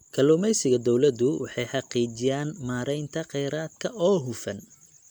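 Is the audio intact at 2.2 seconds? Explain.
No. Generation loss runs through the whole clip, including 2.2 s. It was likely caused by about four MP3 re-encodes, each adding fresh noise. The speech sounds swirly, hollow and smeared.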